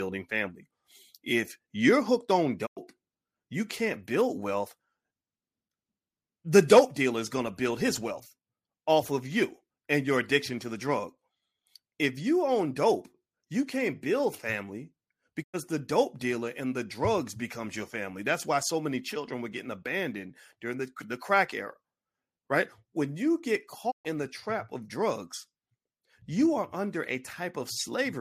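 At 2.65 s after "you're hooked on", 15.42 s after "you can't build family" and 23.90 s after "you get", digital broadcast dropouts fade the speech out over 20 ms and mute it for 96, 96 and 128 ms while the receiver waits for good frames. The gaps are clean silences rather than hiss or crackle, which separates them from analogue reception fades.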